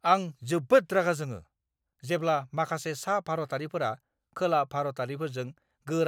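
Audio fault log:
No faults are heard anywhere in the speech. There is nothing here to log.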